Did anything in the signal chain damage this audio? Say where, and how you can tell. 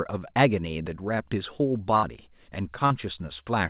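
Yes. There is a burst of packet loss on the network from 1.96 to 2.17 s. The receiver stretches the last sound for 65 ms, fading it. Then 60 ms is skipped.

There is a short concealed packet loss from 2.86 to 2.92 s. About 40 ms arrived late. The decoder extrapolated the previous sound, leaving a brief smear.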